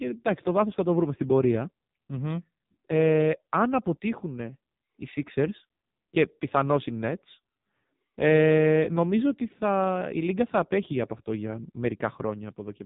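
From start to finish the speech carries heavy AMR narrowband mobile codec damage. Nothing survives above 3.8 kHz, and the voice sounds buzzy and synthetic because a vocal-tract model excited by sparse pulses is standing in for the real waveform. That degree of roughness points to one of the low AMR-NB modes, around 5.9 kbps. A plain telephone band-limit would muffle the voice without adding that buzzy, pulse-driven artificial texture.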